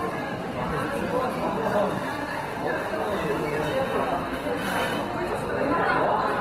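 Opus compression runs throughout the clip and is plainly audible. The sound keeps its full bandwidth but turns grainy, rough and noisy, the likely cause being Opus in its music mode starving bands of bits and filling them with folded or noise content, which fits roughly 16 kbps.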